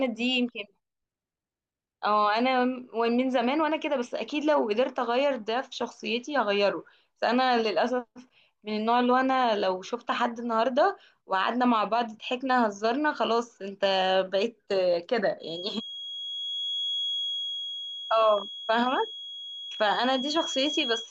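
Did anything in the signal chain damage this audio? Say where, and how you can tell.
Yes. A feedback whistle at 3.3 kHz runs from 15.37 s to the end, about 10 dB below the speech. Likely cause: loudspeaker output leaking into the microphone, near oscillation.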